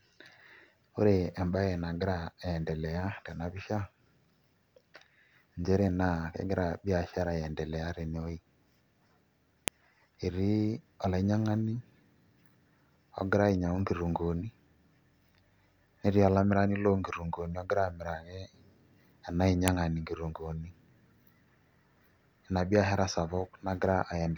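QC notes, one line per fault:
9.68 s and 19.68 s: file header played as audio. A sharp, loud snap lands at each join, exactly 10 s apart, which fits pieces about 10 s long being joined without removing their headers, so a few dozen header bytes are read as sample values. Unlike a dropout or underrun click, no audio is lost around it. The snap ignores the speech level and sits strictly at the piece boundaries.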